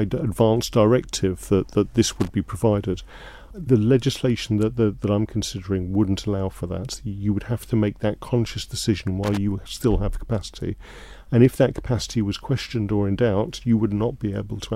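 At 2.20 to 2.28 s and again at 9.24 to 9.37 s, loose connector crackle appears: a worn contact breaking and remaking chops the signal into an irregular scratchy burst, unlike a single clean digital click or a smooth dropout.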